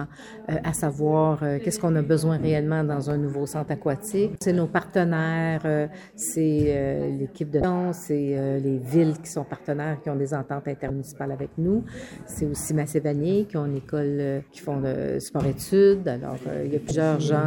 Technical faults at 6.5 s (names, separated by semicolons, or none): none